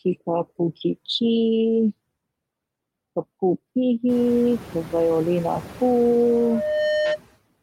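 A noise suppressor is working on the speech from start to finish, estimating which frequency bands hold steady noise and pulling them down by about 18 dB frame by frame. The background therefore drops away in the gaps and returns under each phrase. From around 4 s the room noise rises by about 21 dB, to sit about 19 dB below the speech, giving the suppressor more to fight.

At 6.22 s a loudspeaker feedback squeal begins. The microphone is picking up the loudspeaker it drives, and at 608 Hz the loop's gain has passed one, so that frequency feeds on itself. It swells over roughly 0.7 s into a steady tone about as loud as the speech and holds until 7.18 s.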